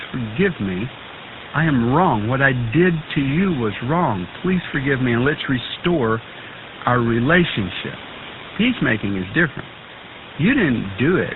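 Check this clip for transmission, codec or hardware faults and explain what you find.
One codec fault runs through the whole clip: GSM full-rate coding, clearly audible. Throughout, the speech has a buzzy, gravelly roughness and nothing above 4 kHz. This fits the 13 kbps GSM coder, which models the vocal tract and drives it with sparse, regularly spaced pulses. The background room noise, about 17 dB below the speech, belongs to the recording and is not a system fault.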